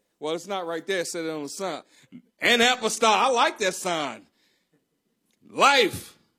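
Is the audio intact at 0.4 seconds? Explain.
Yes, at 0.4 seconds the speech is intact, with no audible fault at that moment.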